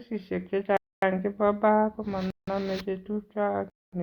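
Blocks of digital silence replace the speech with zeros three times: 0.77–1.02 s (256 ms), 2.30–2.48 s (about 171 ms, which fits an 8192-sample block), and 3.70–3.93 s (226 ms). Each hard cut leaves a short hole.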